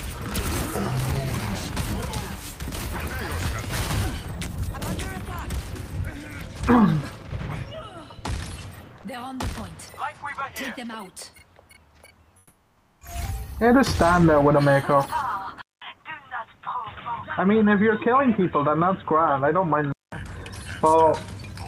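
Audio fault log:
12.37 to 12.97 s: comfort noise in place of the background. For 0.6 s the real background disappears. A steady, featureless hiss replaces it, about 5 dB quieter. The background sits about 40 dB below the loudest parts. That is low enough for a voice detector to treat the gap as silence. The likely cause is Opus discontinuous transmission. The sender paused, and the receiver filled the pause with synthetic noise until sound resumed.
15.62 to 20.12 s: input switched to a poorer device. A short silence of about 0.2 s marks the change. The sound then turns dull and boxy, with nothing above 3.8 kHz. The level drops by roughly 5 dB. A new noise floor appears, roughly 40 dB under the signal. This narrow band and changed tone likely come from the system switching to another microphone or a headset's call profile.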